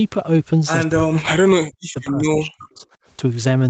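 From 0.95 to 1.4 s and again from 1.57 to 2.85 s, the speech sinks by as much as about 40 dB, in places nearly to silence, with brief returns between. This is likely speech suppressed in double talk: an echo canceller, hearing the far side at the same time, mistook the near talker for echo and turned it down. The 8 kHz band limit of the call path stays the same throughout.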